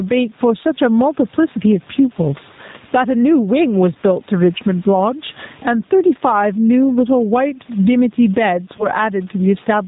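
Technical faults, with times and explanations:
Throughout: gain pumping, loud and soft parts squashed closer in level with the gain swinging by roughly 15 dB, likely from excessive input gain driving a fast limiter.
Throughout: G.729 codec at 8 kbit/s, nothing above 4 kHz, speech plainly rough and synthetic from pulse-based excitation rebuilding each frame.
8.77 to 8.88 s: VoIP packet loss concealed by the speech codec, a 20 ms gap filled with fading extrapolation from the last pitch and filter, leaving speech weak briefly afterward.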